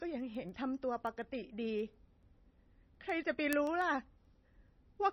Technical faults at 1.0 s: MP3 compression; word clock ticks

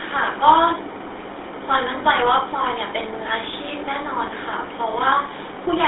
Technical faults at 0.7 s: GSM full-rate codec

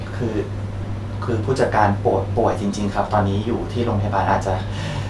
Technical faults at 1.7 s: none

